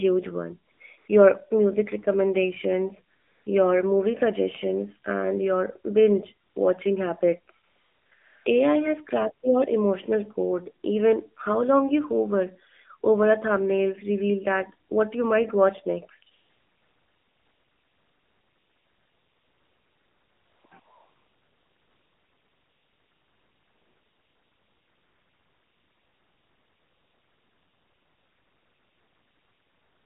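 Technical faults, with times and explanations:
Throughout, AMR narrowband mobile codec: the sound is squeezed into a 200 Hz to 3.5 kHz phone band, and at 7.4 kbps the codec rebuilds speech from a vocal-tract model fed by only a few pulses per 5 ms. That gives the plainly audible buzzy, synthetic edge.
0.72 s to the end, AMR comfort noise: nine gaps where the phone stopped sending speech frames and the receiver filled in smooth synthetic noise. Short ones run 80 to 480 ms up to about 8.5 s, then long stretches at 16.32–20.64 s and from 20.80 s on, so the background switches in and out.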